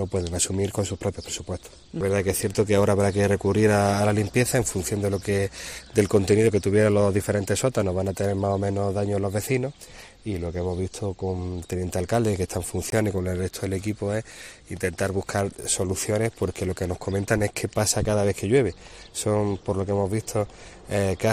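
At 12.90 to 12.92 s, a packet of audio most likely failed to reach the headphones in time over the wireless link and was thrown away, a Bluetooth dropout. The output goes silent for about 20 ms, which fits a single lost packet. The gap is heard as a brief hole, and the sound comes back already further along, as though it had kept playing through the silence.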